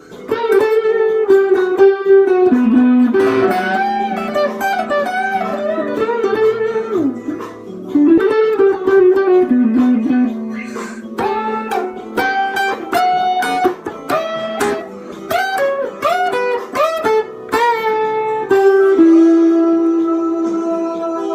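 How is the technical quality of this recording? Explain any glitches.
The recording has two glitches just after 8 seconds.

At 8.17 to 8.19 s there is a skip ahead: roughly 0.4 s of audio was dropped, on the way or by an overflowing jitter buffer, so playback jumps straight forward with no filler.

From 8.33 to 9.77 s comes a jitter buffer speed-up: the receiver trimmed short pitch-period pieces, around 0.15 s in all. The audio runs at 109% speed with unchanged pitch and sounds hurried.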